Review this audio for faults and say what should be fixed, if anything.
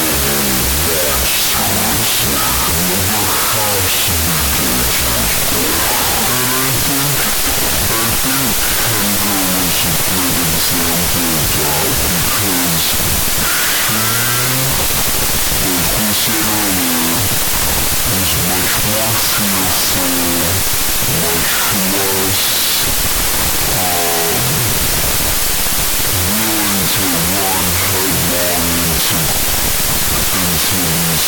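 A wrong sample width runs through the whole clip. The speech sits buried in loud broadband noise at half speed and an octave low, which fits 32-bit float data read as 16-bit integers. A wrong sample rate would slow it without the noise. Prevent this by reading the sample format from the file header instead of assuming 16-bit integers.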